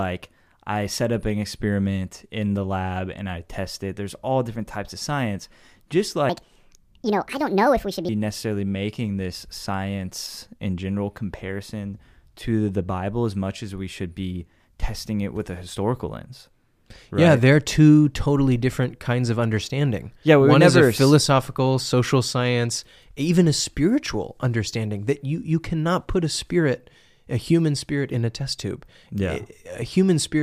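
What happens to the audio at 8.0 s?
At 8.0 s the speech is still inside a section at the wrong speed, running from 6.29 s to 8.09 s, just before "necessarily making this science". It plays 1.58 times too fast, pitch rising about seven semitones, likely from playback against the wrong clock.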